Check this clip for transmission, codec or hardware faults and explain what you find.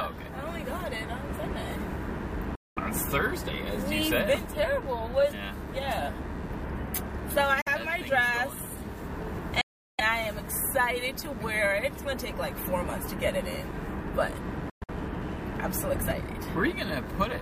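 Two faults are audible: a background computer activity noise throughout and four short silences that behave like Bluetooth dropouts.

Computer activity noise runs through the whole clip as a faint buzz pulsing at around 100 Hz, roughly 35 dB below the wanted sound. Changing processor, graphics or mouse load shifts the ground that the audio circuit shares with the computer, and that shifting current leaks into the output. Its rhythm follows the machine's activity, not the sound itself, so it persists under and between everything else.

Bluetooth dropouts, as the likely cause, appear as sudden holes at 2.55–2.78 s (209 ms), 7.61–7.68 s (46 ms), 9.61–10.01 s (372 ms) and 14.70–14.90 s. The last one is broken into several gaps spread over about 190 ms, with the longest gap about 116 ms. Packets that missed their delivery deadline were discarded, so the output falls silent. Playback then resumes further along, as though it had continued unheard.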